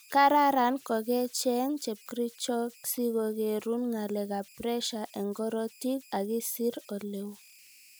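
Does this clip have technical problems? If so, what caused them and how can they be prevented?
Yes. Converter idle tones run through the whole speech clip. A tone around 3 kHz sits about 28 dB below the signal. An undithered delta-sigma converter falls into repeating bit patterns when its input is small. Enabling proper dither at the converter prevents this.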